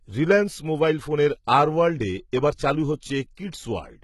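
HE-AAC compression, likely the cause of what runs through the whole speech clip: the treble is present up to about 11.8 kHz and absent above it, but it doesn't belong to the voice. Only the lower spectrum is truly coded, and the top is synthesised by copying lower bands upward under a coarse envelope. The damage is heavy and fits a very low bitrate, around 16 kbps. The harmonics above the crossover don't line up with those below, so sibilants come out gritty, metallic and lispy.

Pre-echo, from 1.45 to 1.47 s: a short hiss rises in the short gap just before a sharp onset, spreading about 25 ms ahead of it. The transform codec distributed its quantisation noise evenly across a block in which the attack fell late, so noise scaled for the loud moment leaked into the quiet stretch before it. The onset itself loses its edge and sounds softened and smeared.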